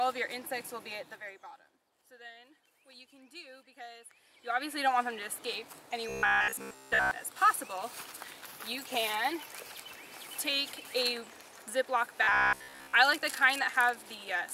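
From 4.08 to 4.82 s there's zipper noise: the level shifts about 20 dB in unsmoothed 1 dB steps, roughly fifty a second, so it ticks audibly. Then, from 6.09 to 7.11 s and again from 12.23 to 12.93 s, the sound goes robotic, a rigid 66.8 Hz buzz, likely from repeating short buffers in place of most of the real audio.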